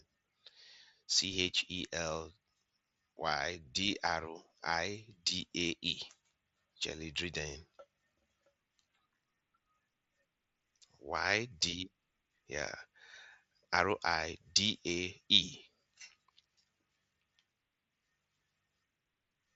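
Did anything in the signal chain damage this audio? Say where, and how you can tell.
No, nothing in the chain damaged this audio.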